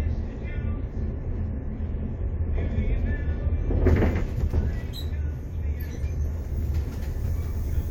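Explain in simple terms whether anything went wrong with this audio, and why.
Nothing went wrong; listening through the sound, no technical fault turns up at any point.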